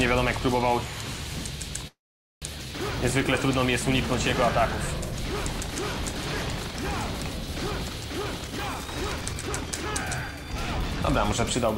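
From 1.87 to 2.45 s a call audio freeze, likely from delayed packets draining the jitter buffer, fills about 0.54 s: a brief fading continuation, then 0.47 s of blank spectrogram, with nothing lost but playback delayed.

From 8.39 to 9.86 s a jitter buffer speed-up plays the sound at 119% and trims roughly 0.3 s. From 10.26 to 10.92 s a milder one runs at 105%, cutting a few tens of milliseconds. Both sound hurried at unchanged pitch, with spectrogram events compressed in time but not shifted in frequency.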